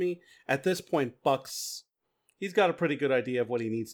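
From 0 to 1.5 s, the speech carries crude rate conversion. Samples were repeated to stretch the rate, with no filter. The pattern fits 44.1 kHz raised to 48 kHz. It adds a gritty, inharmonic fizz, roughly 30 dB below the speech, tracking louder, brighter sounds.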